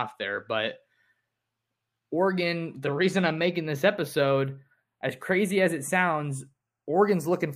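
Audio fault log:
throughout, channels drifting apart: the two channels run on clocks roughly 30 ppm apart, so the offset between them grows steadily to a fraction of a millisecond. In mono the comb notches glide slowly through the speech. Unlike a flanger, the sweep moves one way without cycling.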